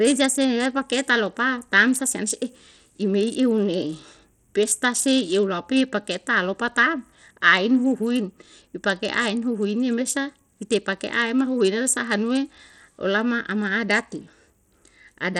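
From start to finish the speech carries plainly audible codec damage. The top end is thin and unstable, with high frequencies dropping in and out, and a gritty, granular noise plus aliasing sits on the sound. This is likely Bluetooth SBC compression at a low setting, one that fits a bitrate around 80 kbps. At that rate the weaker upper sub-bands get few or no bits, and the remaining bands are quantised coarsely.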